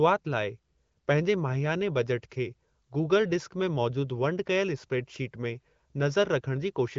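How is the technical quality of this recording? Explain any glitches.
The technical quality holds up, and there are no glitches to explain.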